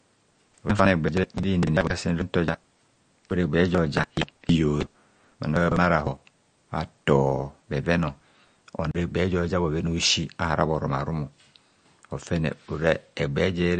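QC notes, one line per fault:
Throughout: MP3 compression, likely; the speech is band-limited with nothing above 9.1 kHz and has a plainly audible watery swirl where weak spectral lines switch on and off, fitting a low bitrate near 42 kbps.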